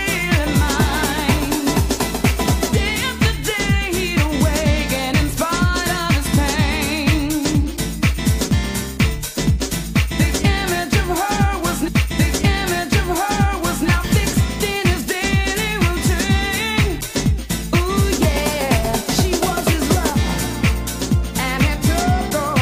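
The audio has a stream segment repeated. At 11.87 s playback jumps back, with a small blip at the seam. The previous 2.0 s of sound then plays again until 13.86 s. The player fetched or queued the same segment twice, stretching the clip by that amount.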